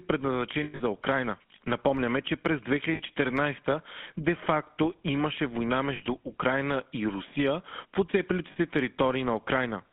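Throughout, the speech passes through the GSM full-rate codec, which fits a 13 kbps pulse-excited vocal-tract model on a 150 Hz to 3.5 kHz line. It leaves a plainly audible buzzy, gravelly roughness. Lost GSM frames make the decoder repeat the last good frame's settings, producing a brief rough, metallic ring. From 0.64 to 0.82 s, 140 ms is lost in scattered gaps, the longest run about a tenth of a second. Shorter 60 ms losses follow at 2.94 s, after "че през", and at 5.96 s, after "имаше война", and a 40 ms loss comes at 8.52 s, after "в оцепилите".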